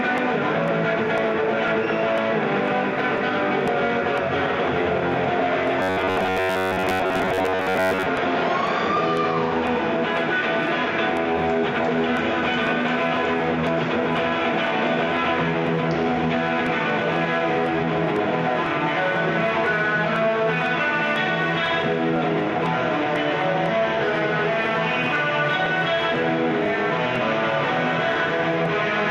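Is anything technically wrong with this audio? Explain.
Yes. From 5.82 to 8.08 s the audio turns into a rigid, metallic buzz fixed at about 93.8 Hz: robotic sound from repeated short buffers. The likely cause is starved input, with a roughly 10.7 ms segment looped over most of that stretch while real audio is skipped.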